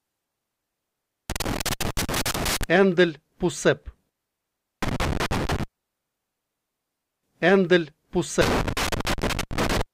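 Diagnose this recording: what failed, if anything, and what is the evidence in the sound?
Loose connector crackle in the analogue wiring: irregular bursts of scratchy crackle run from 1.30 to 2.64 s, 4.82 to 5.63 s and 8.41 to 9.82 s. A worn or dirty contact is making and breaking as it moves, chopping the signal.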